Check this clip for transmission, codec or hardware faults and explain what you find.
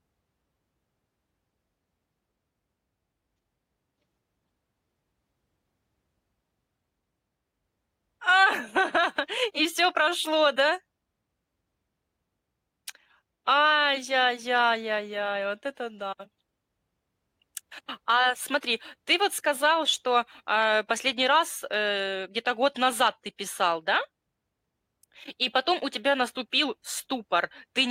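No faults found in this clip.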